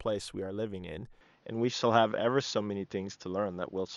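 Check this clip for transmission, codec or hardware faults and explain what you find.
One fault is present. From 1.21 s to the end, the speech turns duller, with nothing above 6.9 kHz, a level shift of a few decibels and faint new background noise, with no gap. The likely cause is an input switched to a poorer, narrower-band device.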